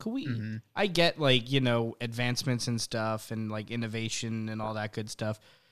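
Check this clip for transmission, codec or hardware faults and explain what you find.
One codec fault is present: a corrupt frame decoded, from 4.64 to 4.71 s, just after "and like innovation and". Bits inside the compressed data were altered, and the decoder reconstructed the damaged frames rather than concealing them, so misread gains and codes placed energy at wrong frequencies. The result is a brief 70 ms chirp or burst of noise, around -25 dBFS, whose length fits a few consecutive damaged frames.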